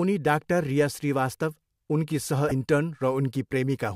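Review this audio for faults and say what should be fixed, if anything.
Damaged data in a compressed stream at 2.48 to 2.52 s: corrupted bytes make the decoder misread frames and lose sync while it hunts for the next frame header, producing a brief glitch in the speech. On a spectrogram it appears as a short break in the pattern; the waveform shows a jagged discontinuity. Prevention: verify file integrity with checksums and use error-resilient transport.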